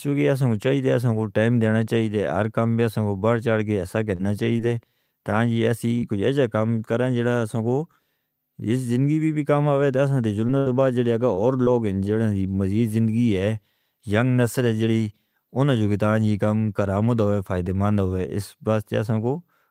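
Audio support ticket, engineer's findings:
Short concealed packet loss, six events: 4.15 s just after "بڑھ چڑ کے ایسا", then 4.57, 5.99, 10.47, 11.35 and 11.65 s, the last two shortly before "لوگ ہیں جو مزید". Symptom: brief smear or wobble, with short sounds sometimes dropping out. Component: receiver jitter buffer and decoder concealment. Mechanism: 20 to 40 ms of audio arrived too late. The decoder extended the preceding sound for about 13 to 35 ms, then crossfaded back into the real signal.

Burst of packet loss at 10.58 to 10.69 s, right after the 10.47 s event. Symptom: a held buzz or fading hiss, then the sound resumes further on. Component: network path and receiver concealment. Mechanism: about 80 ms went missing in a row. Roughly 76 ms was synthesised from the last sound and faded down during the gap. Playback continued past the lost stretch.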